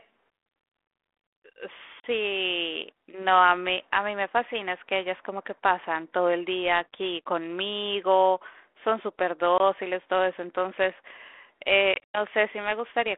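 Sharp silent holes break the speech at 2.0 s for 40 ms and at 9.58 s for 20 ms. More holes are scattered across 11.94 to 12.18 s, the longest lasting 100 ms. Each return comes back slightly distorted before settling. This is packet loss on an ADPCM call: lost packets become silence, and the decoder's predictor and step size drift from the sender's.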